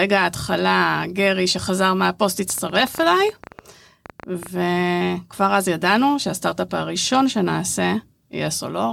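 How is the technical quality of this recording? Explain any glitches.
The recording has one clear glitch, a train of clicks. From 2.50 s to 4.47 s, about twenty sharp clicks sit over the speech. They arrive at roughly 10.7 per second, but the spacing is irregular. Each click has much the same shape. They peak a few dB above the speech itself. The likely cause is interference from nearby equipment or a faulty connection or power supply injecting repeated pulses. It sounds like uneven ticking or popping laid over the talker.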